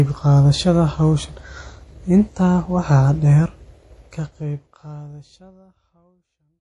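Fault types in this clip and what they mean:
MP3 compression: The speech carries plainly audible damage throughout, likely from MP3 encoding at a low bitrate that fits about 48 kbps. Nothing is heard above 11.5 kHz. Weak detail drops in and out, giving a watery texture. The smooth fade-out starts near 4 s.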